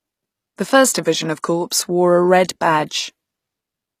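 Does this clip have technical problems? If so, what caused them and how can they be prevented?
Yes. Throughout, the treble sounds gritty, with nothing above 15 kHz. Likely cause: HE-AAC compression rebuilding treble from copied lower bands, which fits about 24 kbps. Prevent it by encoding at a higher bitrate with full-band AAC or Opus.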